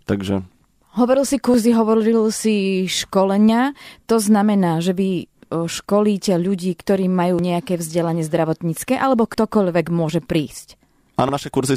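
The speech skips forward abruptly at 1.54, 3.49, 5.44, 7.39, 9.34 and 11.29 s, each time losing roughly a twentieth of a second with the two sides butted together. This is likely audio missing between chunks, dropped as each 2-second chunk closes and the next opens.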